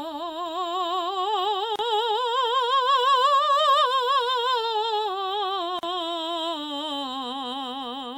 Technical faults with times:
1.76-1.79 gap at a join of encoded pieces
5.79-5.83 gap at a join of encoded pieces

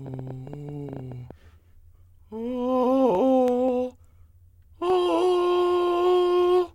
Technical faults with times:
0.06-1.32 train of clicks

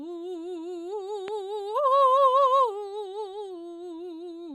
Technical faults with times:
1.28-1.30 loud pop

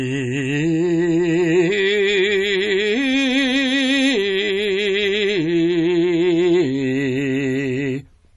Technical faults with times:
0.00-8.37 MP3 compression

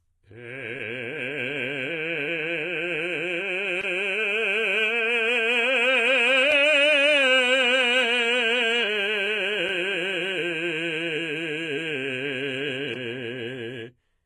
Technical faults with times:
0.00-14.26 HE-AAC compression
3.81-3.83 block of digital silence
6.51 block of digital silence
9.69 block of digital silence
12.94 block of digital silence

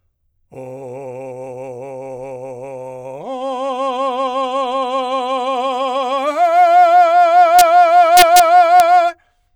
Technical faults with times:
7.59-7.61 integer overflow
8.17-8.40 integer overflow
8.80 integer overflow

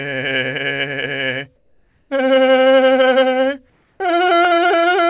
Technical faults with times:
1.56-2.10 comfort noise in place of the background
3.70-4.00 comfort noise in place of the background

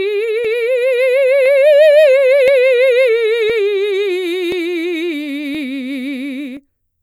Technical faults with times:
0.45-6.57 periodic USB or driver dropouts

